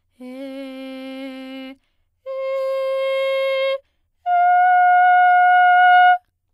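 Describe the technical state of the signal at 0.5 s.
At 0.5 s the music plays through intact, with no dropout, distortion, glitch or other fault audible at that point.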